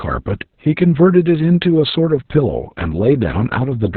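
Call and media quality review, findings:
Opus voice compression, whole clip: speech muffled, hoarse, slightly robotic; nothing above 4.4 kHz. SILK narrowband mode, coarse excitation coding, consistent with roughly 6 kbps.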